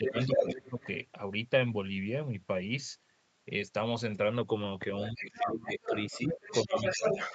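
Speech recorded over a call, with nothing above 8 kHz. Speech suppressed in double talk pulls the talker down by about 10 dB from 0 to 0.88 s, and far harder, about 25 to 30 dB, from 5.13 to 5.93 s and 6.12 to 7.07 s. This is likely an echo canceller ducking both voices it could not separate. The other side's voice leaking through sits at roughly the same level as the talker from 0.06 to 0.7 s and from 5.0 s to the end, where loudspeaker sound likely survived echo cancellation.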